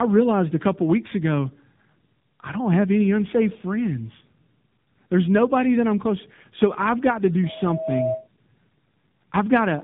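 Throughout the clip the speech sounds rough, muffled and warbly, with nothing above 3.8 kHz. This is tandem speech coding: the sound points to two speech codecs in a row, likely ending in AMR-NB at 7.4 kbit/s, each re-coding the previous one's degraded output.

From 7.43 s to 8.28 s, right after "I've got to", a loudspeaker feedback squeal rises: a steady 639 Hz tone swelling over about half a second until it is roughly as loud as the speech. A microphone was picking up its own loudspeaker, and the loop gain exceeded one at that frequency.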